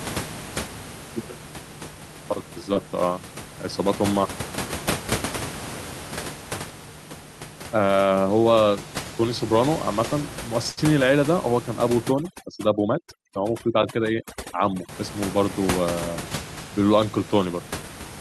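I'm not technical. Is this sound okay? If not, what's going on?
No, there are two problems. At 10.71 to 10.79 s there's a burst of packet loss: a few chunks of the stream never arrived in time, so the player stretched out the last bit of sound as a brief fading buzz or hiss, then jumped ahead, skipping roughly 60 ms of speech.

From 12.09 to 14.89 s you'll hear overdone noise removal. A cleanup filter was set too aggressively, so alongside the background room noise it strips away quieter parts of the voice, leaving odd twinkling specks in the near-silent gaps.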